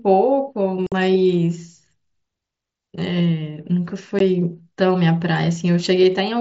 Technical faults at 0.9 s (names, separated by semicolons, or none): unconcealed Bluetooth headset packet loss